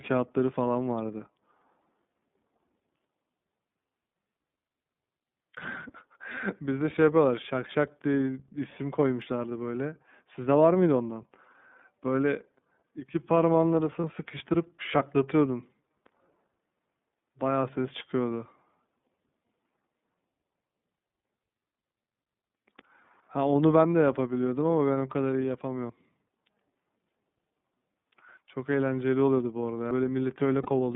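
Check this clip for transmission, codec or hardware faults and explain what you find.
Three kinds of fault are present: narrowband codec coloration throughout, six skips, and two short buzzy fill-ins.

The iLBC codec affects the whole clip. The speech is plainly rough and slightly synthetic, and it sits in a line band of about 150 Hz to 3.6 kHz. Each 30 ms frame's excitation is coded on its own, which fits iLBC's 13.33 kbps mode.

The sound jumps forward at 5.57, 9.22, 17.94, 25.90, 28.37 and 29.91 s. No silence covers the jumps. The likely cause is a dropped buffer (overrun): samples were overwritten before being read, and the two sides were spliced together. The lost pieces range from a few tens of milliseconds up to roughly 70 ms at 29.91 s.

Lost iLBC frames cause a brief held, buzzy vowel-like sound at 14.00 to 14.04 s and 30.63 to 30.66 s. Each gap lasts 30 ms, which fits a single missing frame that the decoder filled by repeating the last pitch cycle with noise. 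Normal speech returns almost immediately afterwards.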